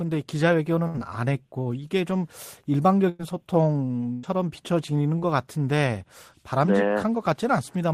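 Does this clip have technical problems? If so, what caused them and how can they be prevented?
Yes. There's a burst of packet loss at 0.87–0.98 s, 3.09–3.21 s and 4.13–4.25 s: the receiver stretches the last sound for roughly 70 to 100 ms, fading it out, then jumps ahead with 60 to 100 ms of speech gone. A jitter buffer with more headroom and some forward error correction would help ride these out.

At 5.19–5.23 s there's a short concealed packet loss, where about 20 ms never arrived and the decoder patched it by continuing the previous sound, leaving a quick smear. Adding redundancy, or tuning the network path to reduce jitter, would prevent these.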